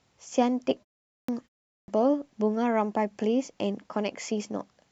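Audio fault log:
1.1 to 1.88 s, clipped start after a pause: twice the sound comes back out of silence with its front end missing, at 1.1 s (about 184 ms gone) and at 1.7 s (about 181 ms gone). Each follows a short pause of 0.34 s and 0.3 s. The output device seems to drop into a sleep state during those gaps and needs a moment to wake and lock again, so the opening sounds get swallowed and speech starts abruptly.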